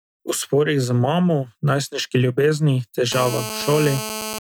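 A nearby 2G phone on a call has its transmit bursts rectified by the audio circuitry, causing GSM phone buzz from 3.12 to 4.39 s, just after "z mamo najstniški ljubezni". A steady, raspy 216.7 Hz buzz, harsh with harmonics, sits about 9 dB below the speech.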